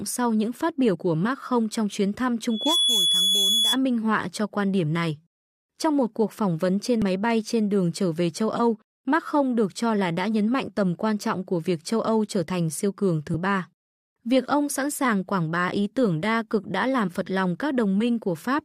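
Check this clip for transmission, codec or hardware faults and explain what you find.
Two kinds of fault are present, both in the speech.

Damaged data in a compressed stream occurs at 0.94 s, after "sau những phát biểu", and at 7.02, 10.67, 13.33 and 17.07 s, after "tưởng đa cực đã". Corrupted bytes make the decoder misread frames and hunt for the next header. Each event is a brief chirp, click or hole.

Loudspeaker feedback squeal runs from 2.50 to 3.78 s, between "không trong chuyến thăm" and "minh họa cho quan". The microphone hears its own loudspeaker, and loop gain exceeds one at 3.4 kHz. That tone grows over roughly 0.3 s to about 5 dB above the speech.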